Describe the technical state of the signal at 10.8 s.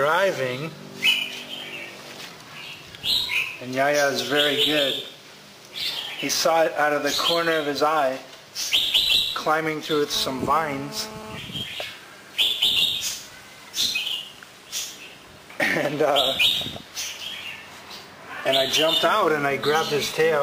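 At 10.8 s there is GSM phone buzz, running from 10.15 to 11.38 s: a nearby 2G phone bursting about 217 times a second in a call, its pulses rectified by the audio circuit. It sounds like a steady, raspy buzz about 14 dB below the signal. A spectrogram shows an evenly spaced 217 Hz harmonic comb, and the waveform shows regular pulse trains.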